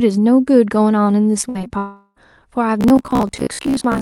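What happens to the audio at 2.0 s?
At 2.0 s the sound sits inside a gap from about 1.78 to 2.18 s, likely a long network dropout. About 0.38 s of audio never arrived, and the receiver filled all of it by stretching the last sound into a fading buzz or hiss rather than falling silent. That long, decaying synthetic tail, instead of a brief click or stutter, marks it as a sustained outage rather than a single lost packet.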